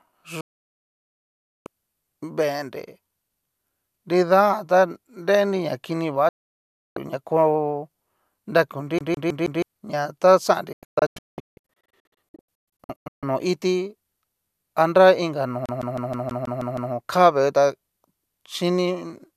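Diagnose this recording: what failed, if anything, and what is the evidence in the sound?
Digital broadcast dropout at the reception stage. Sound mutes abruptly at 0.41–1.67 s, after "na kini va" at 6.29–6.97 s, and in scattered holes from 10.73–13.23 s before "nó iti". Corrupt frames were muted.

CD stuck on one turn, a playback fault. A 160 ms fragment repeats evenly at 8.99–9.62 s and after "anra inka no" at 15.66–16.93 s. The laser kept jumping back.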